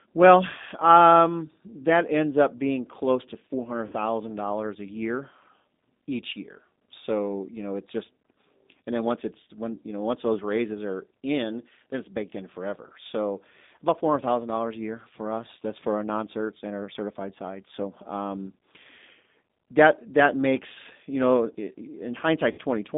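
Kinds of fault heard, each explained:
G.729 codec: The speech passed through a G.729 codec at 8 kbit/s, which rebuilds each 10 ms frame from a vocal tract filter, pitch prediction and a few pulses. Band-limited to roughly 200 Hz to 3.7 kHz, the voice sounds plainly rough, thin and synthetic throughout.
VoIP packet loss concealed by the speech codec: Packets went missing and the decoder filled the gaps by extending its last pitch and filter with falling gain. Right after "up being close to", near 3.87 to 3.95 s, and again near 22.52 to 22.61 s, sound smears into a buzzy tone or coloured noise that fades.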